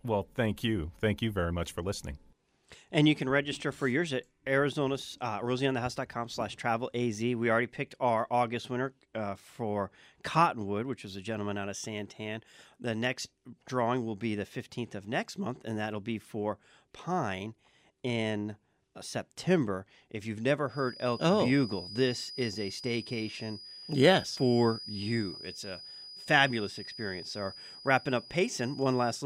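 From 20.64 s to the end, a thin whistle near 4.9 kHz sits well below the speech, swelling and fading slowly. This feedback whistle likely comes from a loudspeaker-to-microphone loop held just short of runaway.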